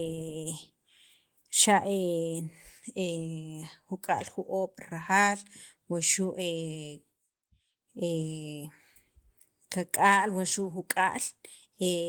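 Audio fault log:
Nothing faulty can be heard anywhere in this recording.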